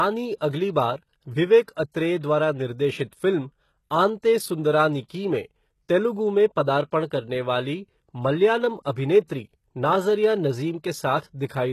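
Throughout the clip, nothing reaches above 12.3 kHz, and the treble above the coded band sounds synthetic, with s sounds coming out gritty and lispy. This is likely HE-AAC compression: spectral band replication rebuilds the top octaves from copied lower bands, and the plainly audible damage fits a bitrate around 16 kbps.

From 0.38 to 0.41 s, a brief hiss of about 30 ms precedes a sharp attack, which itself sounds softened. This is pre-echo: the codec spread quantisation noise sized for the loud onset across its whole block, filling the quiet moment before it.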